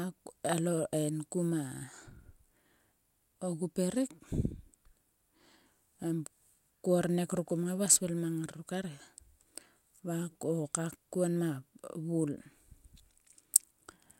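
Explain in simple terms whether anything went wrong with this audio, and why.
Nothing went wrong here: the recorded speech arrives intact, with no technical problems anywhere along its length.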